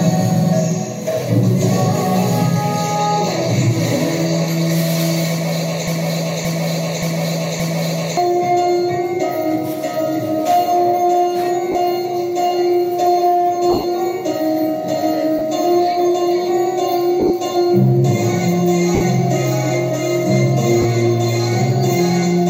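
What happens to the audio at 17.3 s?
Bluetooth LE Audio frames are lost between 17.20 and 17.30 s: about 60 ms of audio goes missing, scattered across that 100 ms window in short gaps of around 20 ms at most, which fits a handful of 10 ms frames. For each gap, the LC3 decoder conceals the hole by replaying the last good spectrum with its phases randomised. Any steady tone there turns briefly into a rough, noisy smear instead of clean dropouts.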